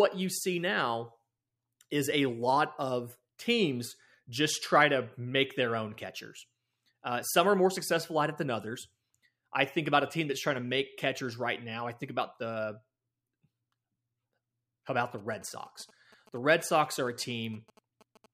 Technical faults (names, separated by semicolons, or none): GSM signalling bursts